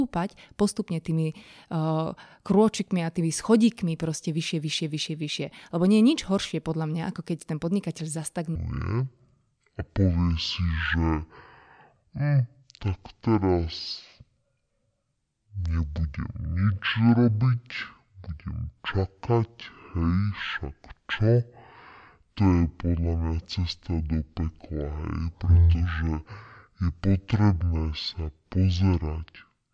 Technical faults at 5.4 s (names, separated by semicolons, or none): none